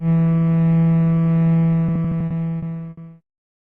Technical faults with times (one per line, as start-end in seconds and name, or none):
1.87-2.99 repeated stalls (stutter)